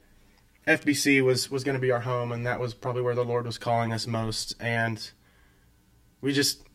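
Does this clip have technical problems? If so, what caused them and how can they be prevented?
Yes. Channel delay (comb filtering) runs throughout: one channel lags by roughly 10 ms, so the mono sum cancels in evenly spaced notches from about 50 Hz, sounding hollow. A spectrogram shows fixed, evenly spaced dark horizontal stripes. Time-align both channels before summing to mono to prevent it.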